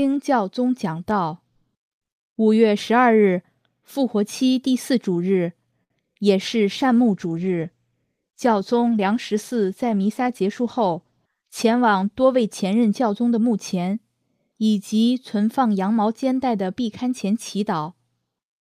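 A short stall from a late packet at 5.83 to 5.92 s: the jitter buffer ran dry, so the last sound was stretched for 67 ms before resuming, held slightly too long.

Short concealed packet loss at 6.14 to 6.17 s: 20 ms never arrived in time and was patched by extending the preceding sound, leaving a brief smear or wobble.

A call bitrate drop from 6.38 to 13.71 s: the encoder fell from 48 to 17 kbps, staying lowest for about 5.6 s, so the audio turns coarse, watery and dulled in the highs.

A jitter buffer speed-up at 11.25 to 12.02 s: excess buffered audio was trimmed by cutting pitch periods, about a twentieth of a second in total, so the sound runs 7% fast at unchanged pitch.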